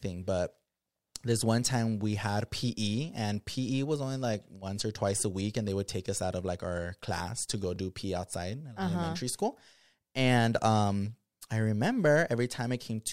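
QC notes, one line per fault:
1.14 s, dropped buffer (overrun): small skip just before "this one time we", likely a few milliseconds of samples overwritten before capture, so the sound jumps straight across the gap.
7.76 s, dropped buffer (overrun): same skip right after "our class to go", likely another few milliseconds lost, with the two sides butted together and no silence.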